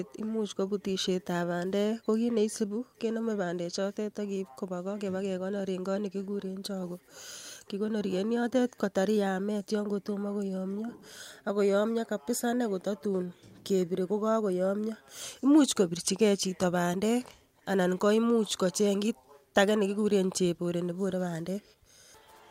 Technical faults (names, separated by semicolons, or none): clock drift between sender and receiver; repeated timing corrections